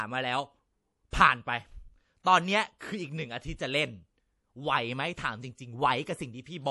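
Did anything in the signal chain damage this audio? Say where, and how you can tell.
Yes. Throughout the speech the sound is watery and swirly, with smeared attacks, chirpy s sounds and nothing above 11.5 kHz, which points to a low-bitrate encode around 48 kbps. This is likely MP3 compression at the codec stage: short of bits, the encoder cuts the treble and drops weak frequency lines frame by frame.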